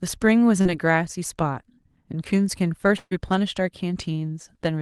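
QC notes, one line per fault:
0.61–0.67 s, short concealed packet loss: roughly 40 ms of audio never arrived in time, and the decoder bridged about 36 ms of it by extending the preceding sound before crossfading back into the real signal. It comes across as a brief smear or wobble.
2.97–3.13 s, burst of packet loss: about 140 ms in a row went missing. The receiver filled it by continuing the last sound and turning it down as the gap went on, so a held buzz or hiss fades, with roughly 20 ms of near silence before the audio resumes further on. On a spectrogram this is a smooth, fading smear that stops abruptly. The waveform tapers, flatlines briefly, then restarts mid-sound. Energy above 12 kHz is absent, consistent with the Opus call path.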